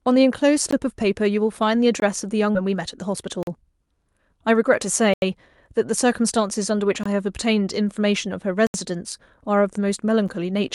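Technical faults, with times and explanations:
0.71, 2.00–2.02, 3.43–3.47, 5.14–5.22, 7.03–7.06, 8.67–8.74 and 10.28 s: block of digital silence. The speech drops to silence and returns with no fade. The gaps last from about 8 ms to 85 ms. The shortest, at 10.28 s, is heard as a tick. The 85 ms gap at 5.14 s is a short hole. Several lengths (21, 43 and 85 ms) fit output buffers of 1024, 2048 and 4096 samples that were not filled in time.
2.55–2.57 s: skip ahead. Playback jumps forward by roughly one and a half seconds, and the two sides are joined almost directly with no silent gap. That stretch of speech is simply missing. The buffer likely threw away audio that had piled up and carried on from newer audio that was already waiting. A block of silence leaves an audible hole with clicks at its edges. This fault leaves no hole, only an abrupt discontinuity in what is being said.
2.65–4.56 s: jitter buffer speed-up. 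Right after the jump, the speech runs about 7% fast at unchanged pitch and sounds slightly hurried. Roughly 150 ms is trimmed away in total, by cutting out many tiny pitch-period-sized pieces to bring an over-full buffer back down to its target delay. The silent block at 3.43 s falls inside this stretch. A skip removes audio in one cut. Here the loss is spread thinly over nearly two seconds, so it is heard as a change of pace, not a break. The Opus call path's top limit of about 12 kHz is present throughout, but it is not a fault.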